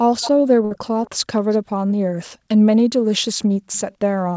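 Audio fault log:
0.21–0.30 s, 1.06–1.10 s, 1.40–1.58 s, 3.17–3.22 s and 3.73–3.95 s, echo leak: faint repeats of the speech arrive 266 ms behind the original, about 15 dB down in the first scrap and about 30 to 35 dB down later. The likely cause is a far-end loudspeaker whose echo canceller let some of its own playback back into the microphone. On a spectrogram, weak harmonic traces repeat the earlier ones at a fixed lag; the waveform shows only small ripples.
0.65–0.74 s, burst of packet loss: about 56 ms of audio was synthesised to cover lost packets, and 60 ms of real signal is gone. The receiver stretched the last sound and faded it, so a held buzz or hiss replaces the missing stretch before the speech jumps ahead. On a spectrogram, harmonics run flat and dim for the concealed part, then break off abruptly. The waveform shows a repeating, shrinking cycle followed by a discontinuity.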